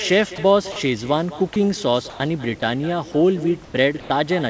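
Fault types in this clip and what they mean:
echo with no canceller: Every phrase is trailed by a fainter, thinner copy arriving about a fifth of a second later and about 17 dB down. The far end's loudspeaker is feeding its microphone, and nothing removes that return before it travels back.
sound dropped by the voice detector: Six short gaps between 0.36 s and 4.1 s, each 20 to 100 ms long, where the speech briefly gives way to steady soft noise. The likely cause is the sender's voice detector mistaking part of the sound for background, with comfort noise filling in.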